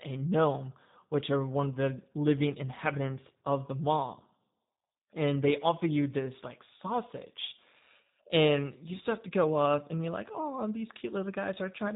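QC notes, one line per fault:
Throughout: G.729 codec. Speech is rebuilt from a vocal tract filter, pitch prediction and sparse pulses, which fits an 8 kbit/s G.729A stream, so it sounds plainly rough and synthetic. A spectrogram shows nothing above 3.8 kHz and smeared, grainy harmonics.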